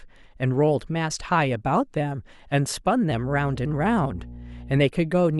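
Speech recording with mains hum from 3.10 to 4.84 s: a steady 60 Hz tone, about 15 dB below the speech, from a ground loop or nearby transformer.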